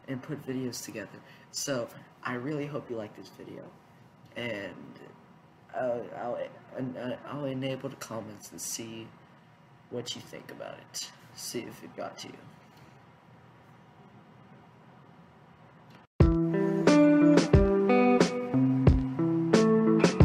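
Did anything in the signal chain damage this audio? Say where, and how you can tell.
No, nothing stood out on listening that would point to damage at any stage of the signal chain.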